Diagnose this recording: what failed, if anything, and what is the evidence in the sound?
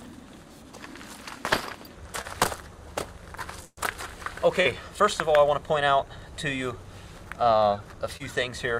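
Brief smears or wobbles at 2.21–2.35, 4.61–4.67 and 8.17–8.32 s: short concealed packet loss on the network, with the receiver bridging 20–40 ms gaps by extending the preceding sound.

At 3.65–3.79 s, a held buzz or fading hiss, then a short silence, before the sound resumes further on: a burst of packet loss, with about 120 ms of audio never arriving and concealment filling the gap.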